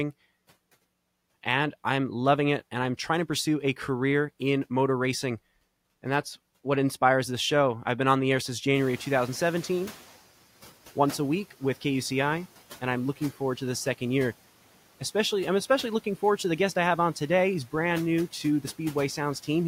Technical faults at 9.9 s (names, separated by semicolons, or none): noise suppressor catching up